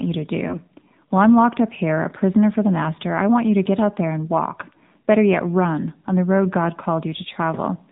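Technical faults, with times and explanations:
Throughout: AMR narrowband mobile codec. The speech is band-limited, with nothing above 4 kHz, and has the plainly audible buzzy, synthetic edge of a pulse-excited vocal-tract model, which fits a low rate around 7.4 kbps. On a spectrogram, energy stops sharply at 4 kHz with an empty band above. Harmonics look smeared and blocky in 20 ms steps. The waveform looks smoother and less detailed than natural speech.
0.48–0.58 s: lost AMR speech frames. Just after "you to", the sound briefly dips or warbles, consistent with a single missing 20 ms frame. The decoder repeated the previous pitch and vocal-tract settings at reduced gain, so that instant dips briefly before the speech returns a little rough. On the waveform, amplitude sags for a short stretch. On the spectrogram, the harmonics smear flat across that gap instead of following the speech.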